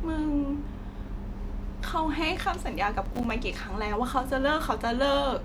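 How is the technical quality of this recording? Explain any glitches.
The speech has one glitch. From 3.05 to 3.30 s there is processor overload crackle. The processor repeatedly missed deadlines for buffers of roughly 5 ms. Each miss leaves a tiny silent gap, heard together as a gritty crackle.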